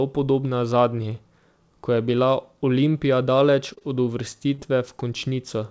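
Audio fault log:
3.74 to 3.83 s, two short stalls from a late packet in a row: the jitter buffer ran dry, so the last sound was held for about 29 ms and then 20 ms before resuming, with nothing lost.
4.54 to 4.60 s, short concealed packet loss just after "daleč od": about 40 ms never arrived and was filled by extending the preceding sound, leaving a brief smear.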